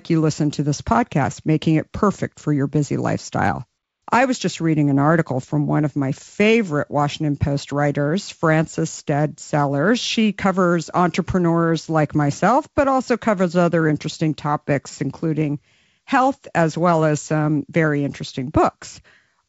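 No technical faults detected.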